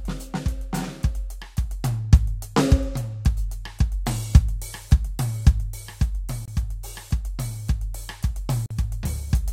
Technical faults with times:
6.45-6.48 Bluetooth dropout
8.66-8.71 Bluetooth dropout

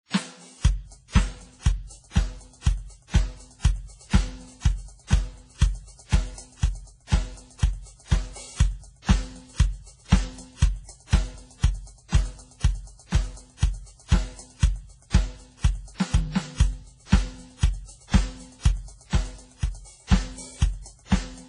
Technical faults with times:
0.00-21.49 transcoding between lossy codecs

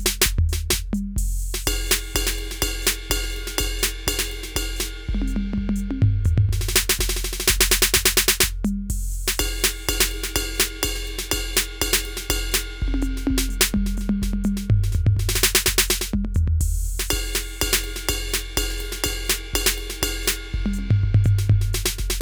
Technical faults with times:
none

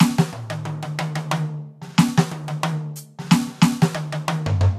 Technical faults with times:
none

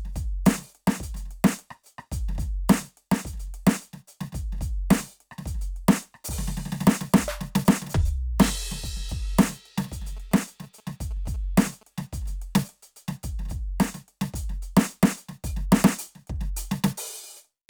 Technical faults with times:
10.17-11.83 GSM signalling bursts

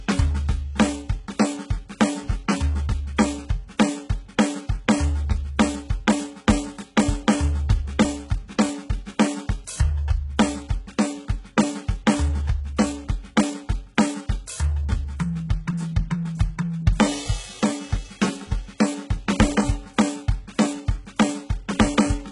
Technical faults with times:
0.00-22.31 HE-AAC compression

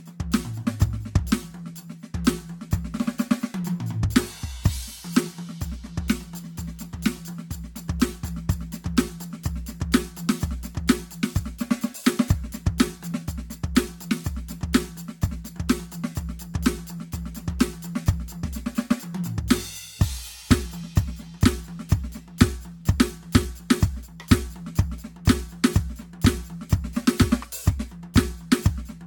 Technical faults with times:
0.00-29.06 generation loss

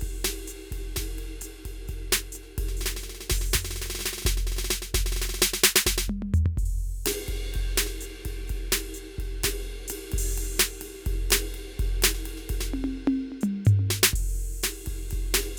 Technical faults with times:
none

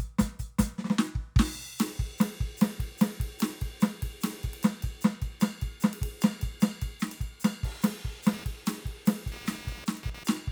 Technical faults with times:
8.28-10.51 computer activity noise

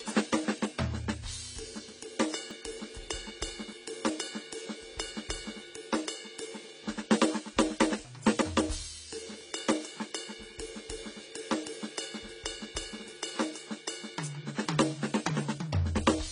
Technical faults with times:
0.00-16.31 AAC compression
2.51 dropped buffer (overrun)
8.42 dropped buffer (overrun)

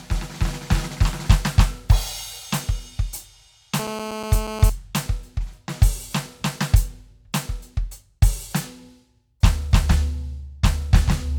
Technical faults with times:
3.79-4.70 GSM phone buzz

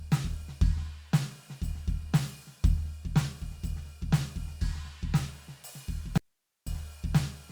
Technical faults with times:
6.18-6.67 audio dropout to a faint residue

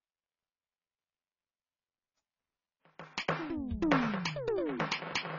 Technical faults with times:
0.00-5.39 AAC compression

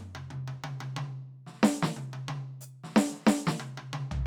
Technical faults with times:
none

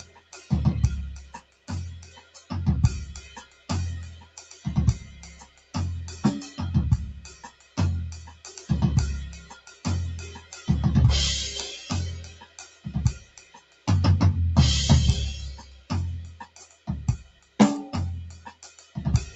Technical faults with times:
0.00-19.36 noise suppressor applied to music or sounds
0.00-5.74 sound cut by the noise suppressor
7.24-10.68 sound cut by the noise suppressor
12.27-13.87 sound cut by the noise suppressor
15.78-19.36 sound cut by the noise suppressor

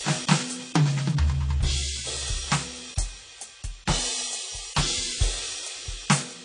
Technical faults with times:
0.00-6.45 transcoding between lossy codecs

